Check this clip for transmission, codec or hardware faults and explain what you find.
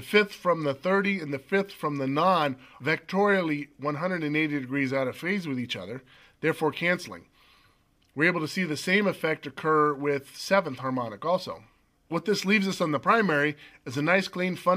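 Nothing in this clip points to trouble along the way, so there's honestly nothing to flag here.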